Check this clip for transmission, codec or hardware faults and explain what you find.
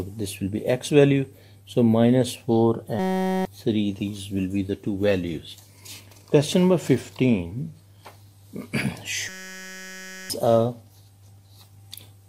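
There are two system hang loops, from 2.99 to 3.45 s and from 9.29 to 10.30 s. The playback side froze while the sound hardware kept replaying the same ring buffer. Each loop is 5.33 ms long, which fits a 256-sample buffer. It repeats at 188 Hz and turns into a steady, pitched buzz. About half a second of audio is lost in the first event and about a second in the second.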